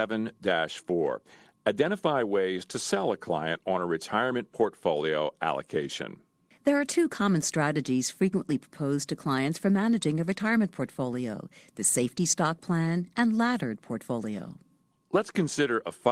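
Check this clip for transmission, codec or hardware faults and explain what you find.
Nothing stood out on listening to this recording.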